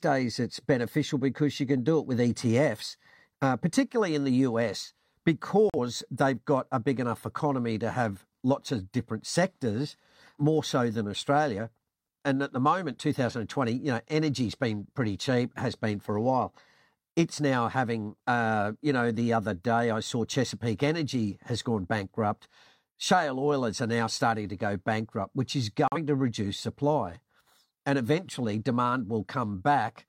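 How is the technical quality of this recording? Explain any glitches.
Two short digital broadcast dropouts break up the speech. At 5.70 to 5.78 s, just before "they've got a big", and at 25.88 to 25.97 s, between "go bankrupt which is" and "to reduce supply", the sound drops to silence. The receiver muted because a frame failed to arrive intact. Each gap loses about 43 ms, which fits a single lost frame. That audio is gone for good.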